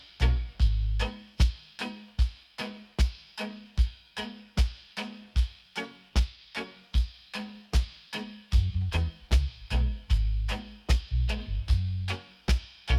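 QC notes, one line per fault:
No faults heard anywhere in this clip.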